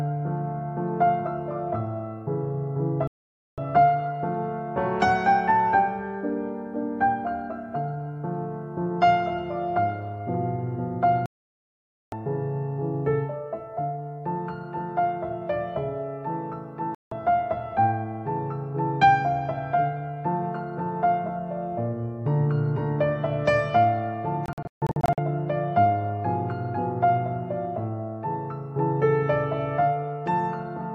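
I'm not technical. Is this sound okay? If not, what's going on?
No, there's a digital broadcast dropout: the receiver lost signal and went silent at 3.07 s (half a second), 11.26 s (almost a second), 16.95 s (a brief blip), and from 24.46 s, in several short holes. Anything sent during those gaps is simply gone.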